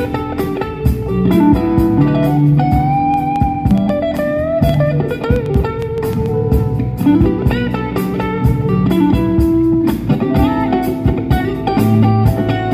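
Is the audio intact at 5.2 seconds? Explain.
No. At 5.2 s the audio sits inside a train of clicks running from about 3.14 s to 6.27 s. Roughly fifteen sharp, similar-shaped pulses arrive at about 4.8 per second, unevenly spaced, and peak around 5 dB above the sound, so they tick over everything, pauses included. The likely cause is interference from nearby equipment or a faulty connection or power supply. On a waveform they show as narrow spikes, and on a spectrogram as thin vertical broadband lines.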